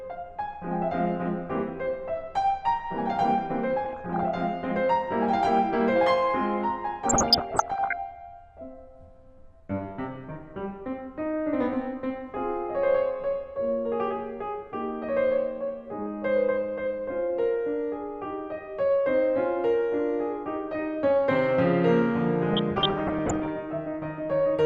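Music, dull and gurgling throughout, with upper bands flickering in and out. That points to MP2 compression, likely at a low rate around 80 kbps, and the damage stays constant rather than coming in bursts. DAB burbling appears at 3.85–4.28 s, 7.07–7.93 s and 22.53–23.5 s: short blips of noise in single sub-bands, caused by reception bit errors rather than steady coding loss.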